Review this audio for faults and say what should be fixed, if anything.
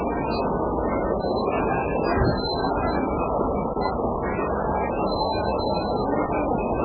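The whole clip sounds watery and swirly, with nothing above 4.9 kHz. That's likely heavy MP3 compression, which fits a very low bitrate around 8 kbps. Encode at a much higher bitrate to avoid it.

There's a 25 ms gap between chunks from 3.74 to 3.76 s, consistent with 2.5-second chunks joined with silence. Strip codec padding and schedule chunks back-to-back to prevent it.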